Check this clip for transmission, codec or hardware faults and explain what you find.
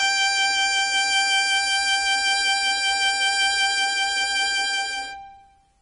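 One fault runs through the whole music clip: heavy MP3 compression is the likely cause. Starved of bits, which fits a very low bitrate, the encoder cut everything above 10.5 kHz and dropped weak frequency lines frame by frame, leaving dull, watery, swirling treble and smeared attacks.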